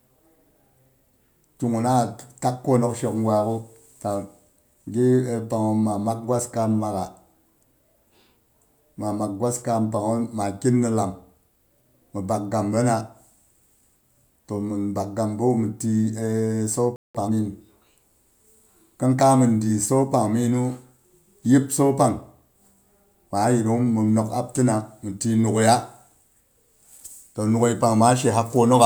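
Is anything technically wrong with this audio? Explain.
Yes. The speech has a playback stall followed immediately by time-compressed catch-up.

From 16.96 to 17.15 s there is a playback stall: the speech cuts out mid-flow and the output goes silent for about 186 ms. The likely cause is the player running out of buffered data, or its output thread being blocked, so nothing reached the output until it recovered. The gap is short but clearly audible as a hole in the speech.

From 17.15 to 17.33 s the player performs time-compressed catch-up to clear the backlog built up during the gap. It removes small segments and cross-fades the remainder, running at twice normal speed while keeping the original pitch. Over those 0.18 s the speech sounds noticeably rushed, before it settles back to normal pacing.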